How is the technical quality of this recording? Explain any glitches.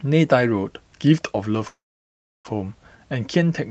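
The recording has one clear glitch, a call audio freeze. The band also tops out near 8 kHz, which fits a call codec such as Opus.

From 1.67 to 2.47 s, the speech stalls into a short fading buzz, then about 0.67 s of silence. It resumes exactly where it stopped, with nothing lost. The likely cause is delayed packets emptying the jitter buffer.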